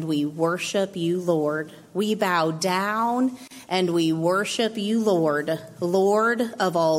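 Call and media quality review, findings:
Gap at a join of encoded pieces, 3.48 to 3.51 s: roughly 33 ms dropout mid-sound, edges smeared, then picks up right where it left off. Probable component is the segment concatenation step. Each piece was encoded separately and stitched untrimmed, so encoder start delay plus last-frame padding sit in the join as silence. Fix is trimming priming and padding before joining.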